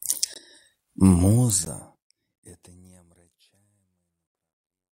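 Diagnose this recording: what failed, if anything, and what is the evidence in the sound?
The driver or buffer stage likely missed its deadlines, so two output blocks were filled with zeros. These blocks of digital silence fall at 0.34 s (19.6 ms) and 1.65 s (13.5 ms). The sound cuts abruptly to nothing and back, giving a tiny hole and, for the shorter block, a tick or dip.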